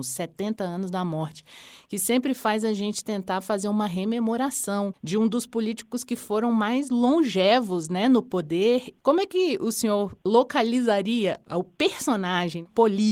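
No technical fault can be heard anywhere in the audio; the signal holds steady throughout, with nothing that points to a problem in capture, processing or playback.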